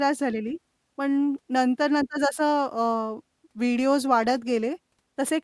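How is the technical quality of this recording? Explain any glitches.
No glitches or technical faults can be heard here.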